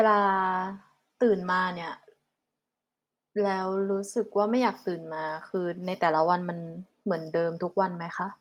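Speech, with no technical fault heard anywhere in the recording. There is nothing to place in time and no cause to trace.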